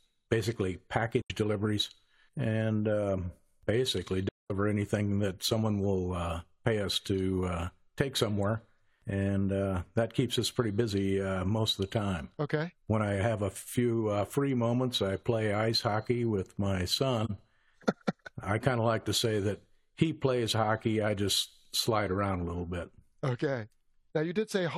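AAC frame loss with muting: compressed frames never reached the decoder, which zeroed their spectrum, and the overlapping windows faded the speech out and back in. The result is soft-edged holes: at 1.21 s, about 85 ms just before "deliveries and um basically"; at 4.28 s, about 213 ms between "deliveries and um basically" and "anything that someone will", a gap that points to five lost frames; and at 17.24 s, a brief dip of about 43 ms after "ice hockey with my".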